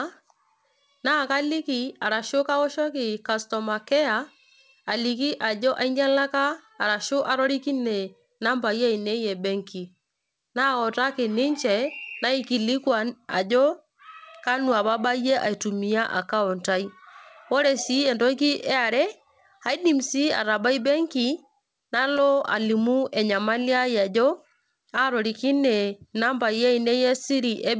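No technical faults can be heard in this speech clip. It has gone through a WebRTC call path, and the lack of anything above 8 kHz, together with the usual coding noise, fits a wideband codec such as G.722.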